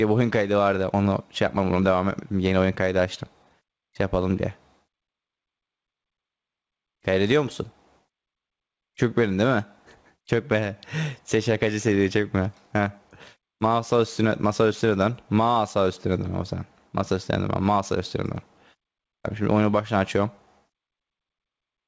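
Gain pumping runs through the whole recording. The level breathes: the gain ducks by around 10 dB each time a loud sound arrives, so loud and soft passages sit squashed close together. This likely comes from input gain set far too high, with a fast limiter clamping down on each peak. On a waveform the envelope looks flattened. A spectrogram shows the sound capped at 8 kHz by the call path.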